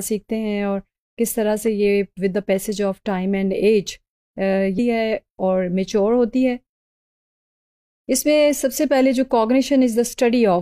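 Damaged data in the compressed stream disrupts decoding from 4.74 to 4.79 s. The decoder misreads the bad frames, loses sync and hunts for the next valid frame header. For roughly 50 ms, the sound breaks into a brief chirp or blip.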